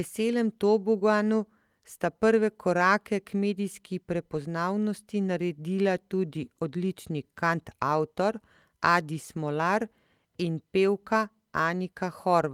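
Speech recording with no technical faults to be heard anywhere in the signal.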